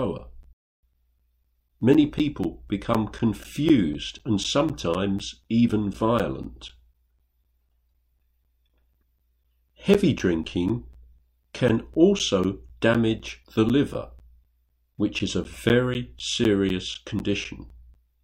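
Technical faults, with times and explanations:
0.18–17.95 s, periodic USB or driver dropouts: something blocks the audio path every 0.25 s, silencing around 10 ms each time, about seventy gaps. They tick regularly under the signal. The waveform shows evenly spaced flat notches, and the spectrogram shows thin vertical broadband lines.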